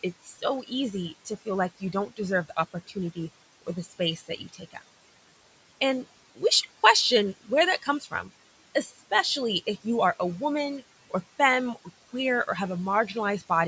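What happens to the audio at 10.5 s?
At 10.5 s you're hearing noise suppressor artifacts, which run through the whole clip. The suppressor pulls down the bands it treats as steady room noise by about 18 dB, so the noise dips in the gaps and swells under the speech.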